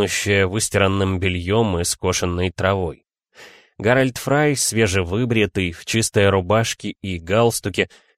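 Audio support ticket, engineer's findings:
No audible defects found on review. Nothing heard points to a failing component in the signal chain.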